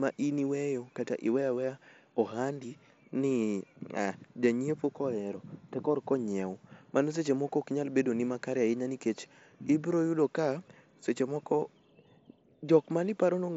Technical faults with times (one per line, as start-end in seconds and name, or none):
none